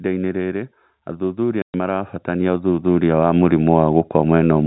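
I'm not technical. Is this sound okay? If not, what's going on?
No. Three things go wrong in this speech.

First, automatic gain falling. From 0.05 to 0.78 s the level sinks steadily. The call's automatic volume control decided the start was too loud or too noisy and turned itself down over most of a second. You can tell it apart from the speaker simply getting quieter because the background hiss drops by the same amount. The control is changing the whole recording, not the talker.

Second, automatic gain rising, from 1.17 to 4.62 s. Now the control thinks things are too quiet and turns up slowly over more than three seconds. The voice and the room noise swell together. That shared swell is what separates it from someone leaning toward the microphone, which would bring up the voice much more than the background.

Third, packet loss filled with silence, from 1.62 to 1.74 s. The audio travels in small chunks, and here a run of them never arrived, which fits six 20-millisecond chunks. 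The receiver played nothing in their place, so there is a clean hole with hard edges. A dropout from a bad cable or weak signal tends to sound crackly or uneven. This gap is dead quiet and cut square.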